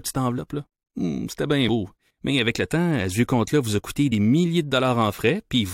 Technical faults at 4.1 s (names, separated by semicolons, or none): compressed frames skipped